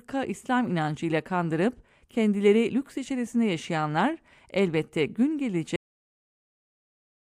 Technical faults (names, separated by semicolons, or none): cut-off end